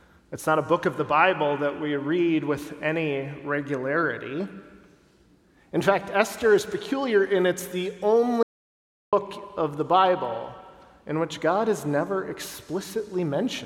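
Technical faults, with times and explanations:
8.43 to 9.13 s, audio dropout to silence: the sound stops abruptly mid-flow and returns just as abruptly about 0.7 s later, with no room tone in between, likely from the input briefly disconnecting while zeros were written. The waveform is flat; the spectrogram shows a blank vertical band.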